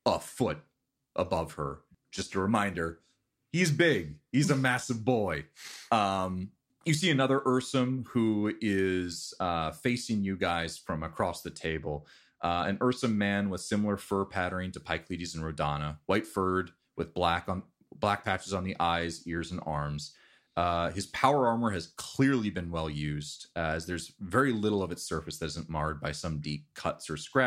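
Speech, with a brief stretch of channel delay (comb filtering) from 11.66 to 12.97 s, where the sound turns slightly dull and loses top-end crispness. One channel lags the other by only a couple of samples, roughly 0.05 ms, so summing to mono cancels shared content near 10 kHz. On a spectrogram this appears as a dark horizontal notch band around 10 kHz across that interval. The waveform looks nearly unchanged, with only slightly softened transients.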